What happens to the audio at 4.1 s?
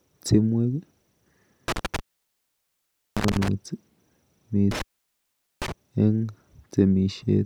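Nothing goes wrong at 4.1 s; the speech carries on intact through that moment, with no dropout, click or other fault.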